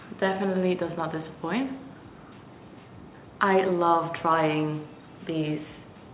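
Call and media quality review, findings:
No faults found; the audio carries nothing above 4 kHz, consistent with a narrowband telephone codec such as G.711 on a normally functioning call path.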